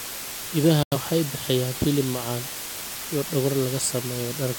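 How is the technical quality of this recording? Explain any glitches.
The technical quality is poor: a loud hiss runs through the whole speech recording, and there is one short dropout near the start.

Low bit depth with dither is present throughout. The audio behaves as if it were stored with only 5 bits, with dither added before rounding. The dither turns the coarse rounding error into steady white noise rather than distortion. That noise sits roughly 10 dB below the speech, so a loud, even hiss covers the entire recording.

A digital broadcast dropout occurs from 0.83 to 0.98 s, just before "bixiyaan hilib macaan". The receiver stopped getting valid data and muted until good frames arrived again. The sound fades out in about 3 ms, leaving a silent hole of roughly 0.15 s before the speech returns. The missing stretch, about 85 ms of programme, fits two lost frames, and that audio is gone.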